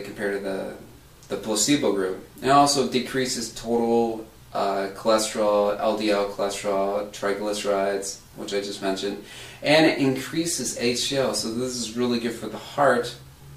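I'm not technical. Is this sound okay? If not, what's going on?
Yes, nothing wrong can be heard in this sound.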